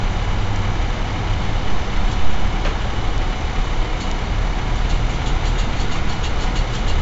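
Throughout the recording of everyday sounds, 4-bit ADPCM compression leaves a gritty hiss riding on every loud event, with roughness on sharp attacks. The encoder quantises each sample as a coarse adaptive step from its prediction, and the heavy damage plus nothing above 7.7 kHz points to a low sample rate, consistent with about 64 kbps.

Bit error spikes land at 0.56 s, 3.18 s and 4.12 s. Each is a sharp, broadband tick unrelated to the surrounding sound, where a flipped bit briefly throws the waveform by a power of two. The one at 3.18 s sounds like a short run of corrupted samples.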